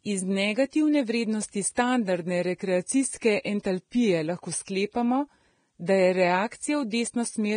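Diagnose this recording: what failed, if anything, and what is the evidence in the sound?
The failure sits at the codec stage, and the likely cause is low-bitrate Vorbis compression. Throughout the speech, nothing is heard above 9.7 kHz. The upper treble sounds hissy and grainy, and consonant attacks blur. The heavy damage fits a bitrate near 23 kbps, where fine detail becomes quantisation noise.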